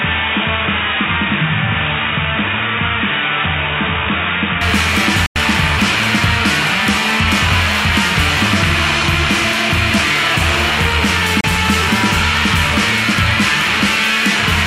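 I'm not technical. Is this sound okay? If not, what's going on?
No. For the first 4.6 seconds the sound is dull and boxy, a bit quieter, with a faint background noise. Nothing above 3.8 kHz gets through. At 4.61 s it clears up at once, with no gap. That is likely an input switched to a poorer device.

There are also two digital broadcast dropouts, short holes where the sound cuts to silence. The first, at 5.26 s, lasts about a tenth of a second. The second, at 11.41 s, is only about 32 milliseconds. The receiver briefly lost the signal, so that audio is gone.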